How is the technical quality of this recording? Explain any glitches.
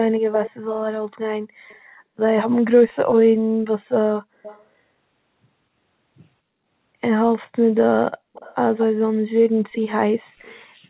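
The speech has a recurring echo leak. It rides on a narrow call band with nothing above 4 kHz, which fits G.711 A-law.

Echo leak occurs at 0.14, 0.44, 1.68, 2.89, 4.43, 8.33 and 8.78 s. A delayed copy of the speech returns about 231 ms late. The cause is likely a far-end loudspeaker whose echo canceller let some of the sound through. The copy sits well below the speech, from about 15 to 35 dB down.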